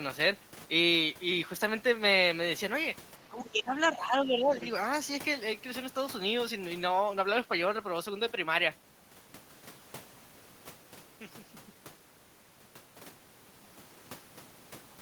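From 3.17 to 4.55 s, speech is suppressed in double talk. The level dips by up to about 10 dB, for roughly a second in total, likely because the echo canceller turned the talker down while the far side spoke. Unlike a dropout, the speech thins and ducks rather than going fully silent.

The other side's voice leaks through briefly at 3.46 to 3.50 s, about 25 dB below the speech, and again at 4.56 to 4.69 s, about 20 dB below. This is likely loudspeaker echo left behind by the echo canceller. It sounds like a faint separate talker, not a smeared copy of the main speech as reverberation would.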